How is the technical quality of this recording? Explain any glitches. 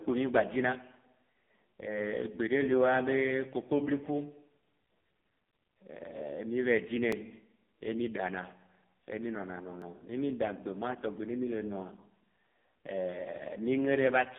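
The recording is heavily degraded throughout by low-rate mobile coding, and it has two brief glitches.

AMR narrowband mobile codec: The whole clip passes through a telephone-style band from 200 Hz to 3.6 kHz, with nothing above 3.6 kHz. The speech sounds buzzy and synthetic because the codec rebuilds the voice from a vocal-tract model driven by sparse pulses. The heavy damage points to one of AMR-NB's lowest modes, around 5 kbps. A simple band-limited phone line would sound muffled but natural. This one carries artificial, buzzy coding artefacts.

Dropped buffer (overrun): There are two tiny skips, at 7.12 s and 9.82 s, each with a minute jump in the waveform. The likely cause is the audio program failing to collect its samples before the hardware overwrote them. Only a millisecond or two of sound is lost, and the two sides are spliced directly together. Unlike a dropout, neither glitch leaves a silent gap. 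Each is a sharp discontinuity, heard as a small jump in the sound.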